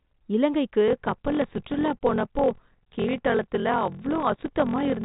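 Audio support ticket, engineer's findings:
Block size mismatch (padded), 0.86 s to end of clip. Steady buzz at 43.1 Hz under the speech, which fits a 1024-sample read block. The upstream stage writes shorter blocks than the next stage reads, and the remainder of each block is zero-filled. This inserts a short gap per block and stretches playback to 0.861x speed with pitch roughly unchanged. Audio is band-limited to 3.8 kHz by the G.726 path at 40 kbit/s, with faint or no audible codec damage.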